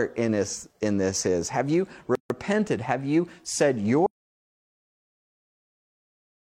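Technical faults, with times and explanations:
2.15 to 2.30 s, gap at a join of encoded pieces: the speech stops for about 148 ms, then resumes exactly where it left off, so nothing is lost, only delayed. The clip was assembled from pieces about 6 s long that were encoded separately. Each encoder run adds a start-up delay of silence and pads its final frame, and neither was trimmed at the join. The edges of the hole are smeared by the codec.
4.06 s to the end, audio dropout to silence: right after "you said" the sound cuts out mid-flow and never returns. The rest of the clip is silent, with no room tone or noise floor, so this is a total loss of signal rather than a pause in speaking. Whatever followed is gone. The likely cause is the input being lost, through a disconnected device, a failed link or a mute, while the recorder kept writing silence.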